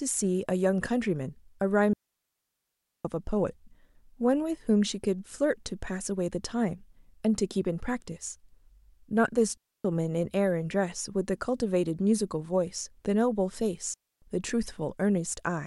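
At 1.93 s the speech cuts out cleanly for about 1.1 seconds, returning at 3.05 s. This is a digital wireless dropout. The link lost too much data and the receiver muted. Shorter holes follow at 9.57 s and 13.94 s, each near 0.28 seconds. Every gap is near silent. No noise burst marks either edge.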